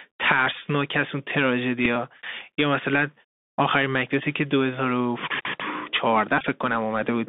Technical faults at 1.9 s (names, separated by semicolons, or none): Bluetooth CVSD headset codec; Bluetooth headset packet repeated